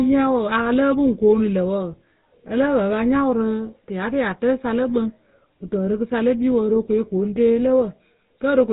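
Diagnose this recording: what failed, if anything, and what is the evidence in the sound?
The codec stage failed. GSM full-rate coding runs throughout: buzzy, gravelly speech with nothing above 4 kHz, which fits a 13 kbps GSM full-rate codec.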